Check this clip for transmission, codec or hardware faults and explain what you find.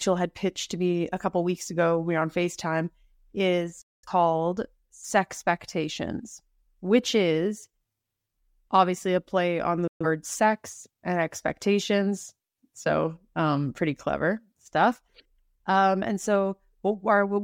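Two digital broadcast dropouts occur, at 3.82 to 4.08 s and 9.87 to 10.06 s, after "obviously a play on" and before "sex and expectations". The receiver lost valid frames and muted, with a fade of about 3 ms, so the speech cuts abruptly to silence. Roughly 0.21 s and 0.13 s of programme are lost, which fits several dropped frames each time.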